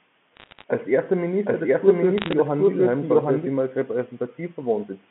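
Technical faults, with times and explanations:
0.36 to 0.64 s and 2.18 to 2.33 s, bit errors on a digital phone line: two short bursts of sharp ticks and crackle sit on top of speech that otherwise passes unchanged underneath. On this 8-bit mu-law telephone line, individual bits were flipped at a rate of around half a percent. Each flip corrupts a single sample, and flips landing on the upper bits or on the sign of a loud sample throw that sample far off, producing each click.
1.45 to 3.47 s, doubled audio track: a second, equally loud copy of the speech runs roughly 0.7 s behind the first. It is full-band within the telephone range and has no decay or room colour, unlike a natural echo, and it starts and stops abruptly. The likely cause is the same audio being captured a second time through a slower path, or an edit leaving two copies out of step.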